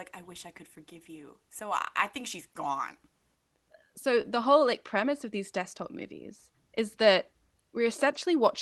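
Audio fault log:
4.21–4.26 s, short concealed packet loss: Just before "whole like premise of", about 20 ms of the call audio did not reach the decoder in time. The receiver covered the gap by extending the preceding sound for about 21 ms, then blended back into the real signal. That is why a brief smear or wobble is heard there. A short consonant can drop out in such a gap. The Opus call path tops out near 12 kHz.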